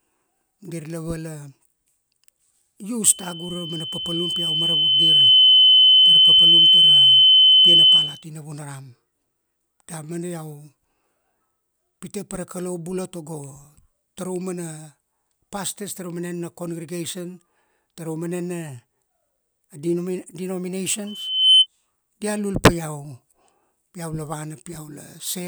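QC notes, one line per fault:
3.06–8.23 s: loudspeaker feedback squeal. A steady 3 kHz tone swells over about two seconds to roughly 15 dB above the speech. The microphone picks up its own loudspeaker, and loop gain above one at 3 kHz lets that tone build until the amplifier limits it or the loop is broken.
21.07–21.67 s: loudspeaker feedback squeal. The same 3 kHz howl returns and builds faster, in under half a second, reaching a similar level before it cuts off.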